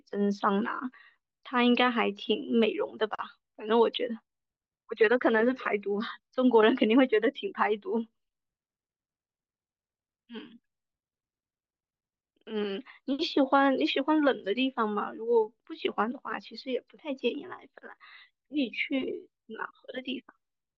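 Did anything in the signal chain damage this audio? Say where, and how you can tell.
Yes. At the converter clock, clock slip clicks tick about every 0.4 s from 0.15 to 20.40 s, likely unlocked clocks around 50 ppm apart, each slipping one sample.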